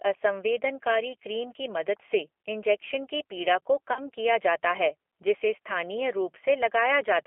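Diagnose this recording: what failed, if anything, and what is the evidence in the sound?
The codec stage is at fault: the whole speech clip goes through the G.729 codec. The band is squeezed to roughly 300 Hz to 3.4 kHz, and the voice has that rough, slightly synthetic quality of a pulse-coded vocal model at a low rate like 8 kbit/s.

There's also VoIP packet loss concealed by the speech codec, on the network side, from 3.93 to 4.00 s. The decoder fills the gap by stretching its last pitch and filter into a fading buzzy tone or coloured noise, which fits about three lost 10 ms frames, and the sound stays weak briefly after.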